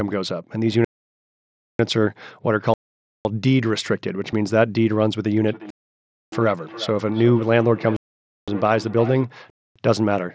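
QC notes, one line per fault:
0.85–1.79 s, 2.74–3.25 s, 5.70–6.32 s, 7.96–8.48 s, 9.50–9.76 s, block of digital silence: the output buffer was likely not filled in time, so whole blocks were written out as zeros. The sound drops to dead silence and returns abruptly. The holes last about 946, 512, 618, 512 and 256 ms. The 512 ms and 256 ms gaps fit 8192- and 4096-sample buffers.
4.32 s, concealed Bluetooth headset packet loss: one packet, about 7.5 ms of audio, was lost between headset and phone, and the receiver filled the hole by repeating the best-matching stretch of the preceding waveform. Because only a single short frame went missing, the patch is almost inaudible, at most a faint blip in the speech. The mSBC link around it carries speech up to 8 kHz with only light grain.
5.43–9.31 s, feedback echo between two devices: a second device in the same room is on the call and replays what this microphone sent, and that playback is picked up again. 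The local echo canceller does not remove it because it only knows its own output. Speech comes back at a fixed delay of around 0.4 s, peaking about 16 dB below the direct speech, each pass thinner and more ringing. The echo is interrupted by the silence gaps at 5.70 and 7.96 s.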